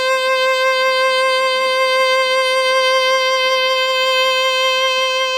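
Throughout the music, stacked artefacts of different codecs heard together point to transcoding between lossy codecs, likely Vorbis into HE-AAC at low bitrates. Nothing sounds above 18 kHz.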